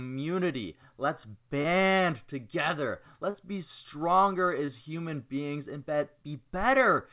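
Short concealed packet loss occurs at 1.62 s, 3.30 s just before "be stronger", and 4.66 s between "be stronger" and "human beings and". Each time, roughly 20 to 40 ms of audio arrived too late, and the receiver extended the preceding sound, leaving a brief smear or wobble. The call path's band limit, with nothing above 4 kHz, points to a G.711 A-law stream at 64 kbps.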